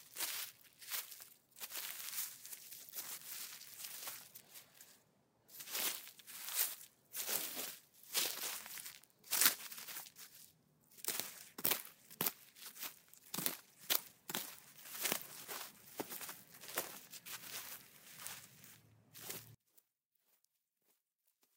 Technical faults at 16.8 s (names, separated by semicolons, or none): none